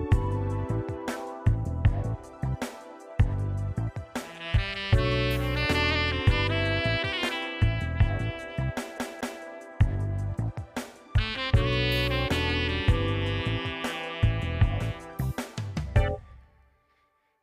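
From 8.98 to 9.44 s the CD gets stuck on one turn: a 228 ms slice repeats twice, each jump marked by a brief mute, giving a quick, even skip.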